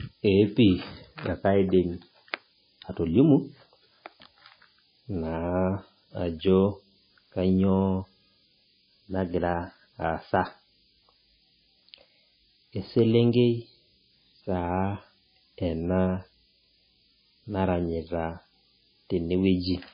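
From start to finish, the speech sits on a steady, thin hiss that gets stronger toward the top of the band. That's low bit depth with noise shaping. The audio is carried on only about 7 bits, and instead of leaving the rounding error spread evenly, it's been fed back and pushed up in frequency. The hiss never lets up and sits only about 15 dB below the speech, so it's always right there under the voice.

Layered on that, also running the whole way through, is heavy codec damage that's most likely MP3 compression, and it points to a very low bitrate of around 17.5 kbps. There's nothing above 5 kHz, so the top end is gone. With so few bits, the encoder has dropped weak frequency lines, which blink on and off from frame to frame. That gives the watery, swirly texture, with metallic chirps on s sounds and smeared attacks.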